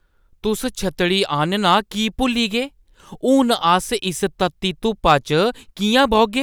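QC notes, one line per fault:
5.08–5.14 s, hard clipping: for about 60 ms the speech peaks run roughly 2 dB past what the signal chain can carry, so their tops are sheared flat. The squared-off waveform adds high harmonics, heard as a brief crackle on the peaks.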